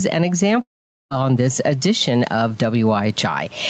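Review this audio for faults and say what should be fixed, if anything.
Throughout, the gain swings by around 15 dB, pulling loud and soft parts closer in level. This gain pumping likely comes from input gain set far too high, driving a fast limiter. Lower the microphone gain so the limiter rarely engages.

From 0.61 to 1.13 s, the sound smears into a fading buzz, then goes silent until "this edition of". This long network dropout likely comes from about half a second of audio never arriving, with the receiver concealing it before falling silent. A more stable connection, with forward error correction enabled, would prevent it.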